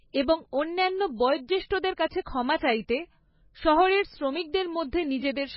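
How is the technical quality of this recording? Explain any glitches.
Poor: the speech sounds heavily compressed throughout. It has a watery, swirling quality, with sibilants turning into metallic chirps and consonant attacks smeared, and nothing is heard above about 5.5 kHz, so the sound is dull and muffled. This is likely MP3 compression at a very low bitrate, which fits something near 17 kbps. Starved of bits, the encoder cut off everything above that point and dropped weak frequency components that flicker in and out from frame to frame, producing the swirl.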